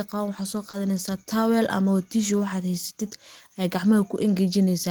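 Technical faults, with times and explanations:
0.69–0.75 s, short concealed packet loss: Just after "ah qaban waxad", 40 ms of the speech never reached the decoder in time. The receiver filled the gap by extending the preceding sound, then blended back into the real audio. This leaves a brief smear.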